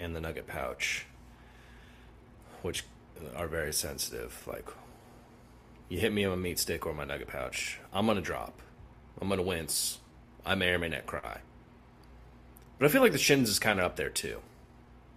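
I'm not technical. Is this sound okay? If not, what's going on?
No. There are four small timing problems.

The first is clock drift between sender and receiver. The device that sent this audio kept time with its own clock, and that clock ran a little slow, by about 4 percent, compared with the receiving device's clock. So the receiver kept getting sound slightly late. It is a steady, background problem that lasts the whole clip. The second fault grows out of it.

The second is repeated timing corrections, heard from 0.45 s to 14.86 s. To keep up with the slow sender, the receiver kept repeating tiny pieces of sound. Overall the audio plays at about 97 percent of normal speed. Together the repeats stretch the clip by roughly four tenths of a second. You may notice a slightly uneven, dragging pace, or faint hiccups.

The third is scattered short gaps, in two spots: from 3.89 s to 4.44 s, and from 7.32 s to 7.92 s. 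Each spot has about three tiny holes where sound arrived too late. The receiver filled each hole by carrying on the last bit of sound. The holes are very short, the longest around fifteen thousandths of a second. Nothing is lost, but you may hear brief ticks or smears.

The fourth is a short stall from a late packet, at 11.18 s to 11.25 s. One chunk of sound was not there in time. The receiver held the previous sound for 41 milliseconds, about a twenty-fifth of a second, until the chunk arrived. Then it carried on exactly where it left off. Nothing is missing. One moment just hangs a touch too long, perhaps with a slight buzz.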